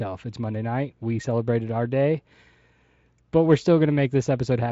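Nothing stood out on listening to this speech, which comes through the Speex path with its content stopping at about 7.7 kHz.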